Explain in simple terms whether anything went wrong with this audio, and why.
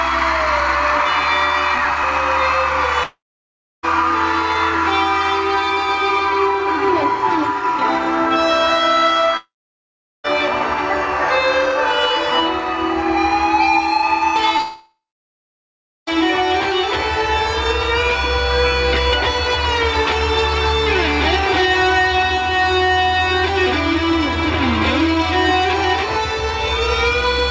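Three times the sound cuts out. Around 3.03 to 3.85 s, 9.37 to 10.26 s and 14.61 to 16.09 s, a brief fading buzz gives way to roughly two-thirds of a second, three-quarters of a second and just over a second of silence. This is likely a long network dropout: the audio stopped arriving, the receiver stretched the last sound briefly, and the missing part never returned.

Just before the last gap, from 14.57 to 14.61 s, there is a tiny smear or wobble. That is a short concealed packet loss: a sliver of audio arrived too late, so the receiver patched the hole by continuing the previous sound and blending back in.

The call codec also limits everything to below 8 kHz, which takes away the highest frequencies.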